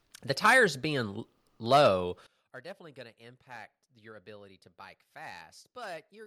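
From about 2.27 s to the end of the clip, the speech drops by about 20 dB to a faint copy. This is the sound of one channel inverted: one stereo channel has likely had its polarity flipped, so summing to mono cancels the shared centre content and leaves only the small difference between channels. On the waveform the amplitude shrinks abruptly there; a spectrogram shows energy fading across the band.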